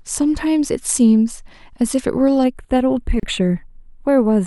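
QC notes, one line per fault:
2.44–4.47 s, channel delay (comb filtering): the speech turns thin and phasey, with a first notch near 5 kHz. One channel lags by roughly a tenth of a millisecond before mono summing.
3.20–3.23 s, gap at a join of encoded pieces: a 33 ms gap with smeared edges cuts the speech. Separately encoded pieces were joined with their encoder delay and padding untrimmed.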